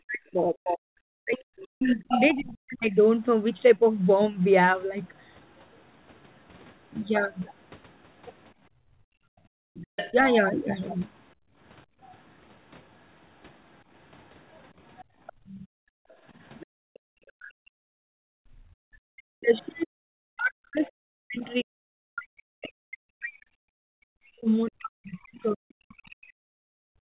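From 0.0 to 3.8 s the speech is pulled down in pieces by up to about 40 dB, likely speech suppressed in double talk, with the echo canceller ducking both the talker and the loudspeaker echo at once. Within that span, from 1.61 to 2.33 s, the other side's voice leaks through, likely as residual loudspeaker echo about 10 dB below the speech.

From 8.7 to 12.0 s the background is gated by the echo canceller, and the room sound drops by about 26 dB while the loudspeaker plays. A quieter leak of the other side's voice follows from 9.76 to 10.13 s, likely uncancelled echo about 15 dB down. From 10.11 to 10.16 s a brief dip of about 10 dB in the speech is likely another double-talk suppression.

A long, faint leak runs from 14.51 to 22.19 s, likely echo around 25 dB under the speech. Between 15.04 and 18.68 s the background is gated again, by about 27 dB.

From 18.96 s to the end the speech is cut back by up to about 40 dB, likely double-talk suppression. 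A very faint leak of the other side, likely echo around 35 dB down, sits from 25.42 to 26.33 s and overlaps a final background gate of about 33 dB from 26.11 to 27.05 s.

The G.711 mu-law call path leaves nothing above 4 kHz.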